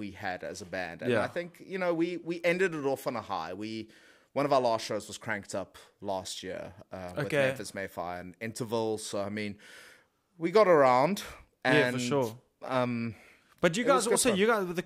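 Nothing stood out on listening to this speech recording.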